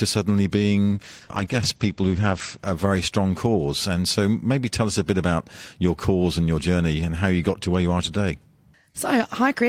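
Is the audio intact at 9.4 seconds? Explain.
Yes, the speech at 9.4 seconds is intact, with no fault audible at that moment.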